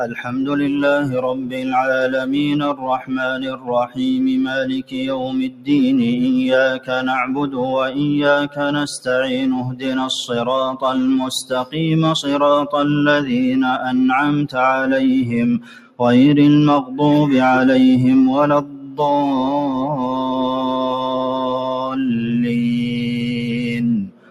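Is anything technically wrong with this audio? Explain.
Yes. A speech noise suppressor applied to music or sounds stays active throughout, treating steady, sustained content as noise, so the level pumps by about 10 dB as sounds swell and fade.

Sound cut by the noise suppressor occurs at 0.07–0.37, 1.34–1.72, 3.35–3.69, 4.78–5.68, 9.67–9.86, 15.59–15.99, 18.62–18.98 and 24.07–24.31 s. The suppressor clamps down hardest there, sinking sustained material by about 6 dB at first and about 9 to 11 dB later, with the longest dip near 5 s.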